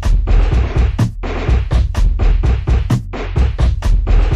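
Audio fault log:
2.78–3.51 s, drift correction step: the sound plays 5.8% faster and rises 98 cents, nearly a semitone, then snaps back, likely a clock-matching rate jump. On a spectrogram, every harmonic steps up together and drops back at 3.51 s.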